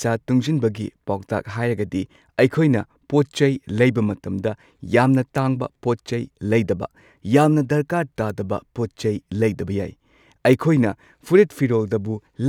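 Three sharp, isolated ticks cut through the speech, at 5.38 s, 8.30 s and 10.53 s. Each is a single bright click with no pitch or tone of its own. It has nothing to do with what is being said. The first two peak at about -16 dBFS and the last is louder, at about -10 dBFS. These are bit error spikes. A flipped bit throws one or two samples off by a power of two before they snap back, and the first tick spans two samples.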